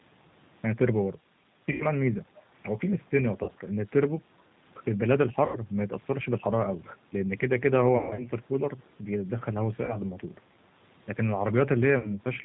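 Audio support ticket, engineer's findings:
Whole clip: speech slightly rough and synthetic; top end dull, nothing above 4 kHz. Component: G.729 codec (G.729A, 8 kbit/s), damage plainly audible. Mechanism: decoder resynthesises each 10 ms frame from a vocal tract filter, pitch predictor and a few coded pulses, so fine detail and high band are discarded.

Dropouts at 1.72–1.83 s, 3.44–3.51 s, 5.46–5.58 s, 7.97–8.30 s, 9.85–9.98 s, 11.98–12.13 s: sound smears into a fading buzzy tone or coloured noise, stays weak and distorted briefly after. Component: VoIP packet loss concealed by the speech codec. Mechanism: lost audio (40–80 ms per gap, 200 ms spread over 280 ms at 8 s, longest run 140 ms) is rebuilt by extrapolating the last pitch and filter with decaying gain. Recovery lags because each frame depends on the previous one.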